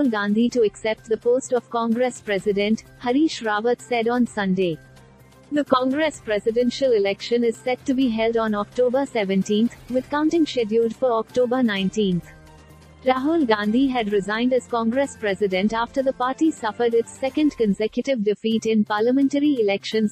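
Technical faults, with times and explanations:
Nothing stood out as a technical problem on listening.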